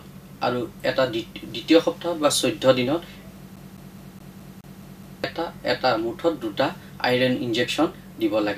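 From 3.56 s to 5.24 s the audio locks into a CD stuck on one turn: a fragment of about 210 ms repeats eight times, with a brief mute at each jump back. A scratch keeps throwing the laser back one track at the same point of every rotation, so the loop length stays fixed and the stutter is fast and perfectly even. That regular spacing and the clean silences at each jump set it apart from network dropouts or buffer glitches, which fall irregularly.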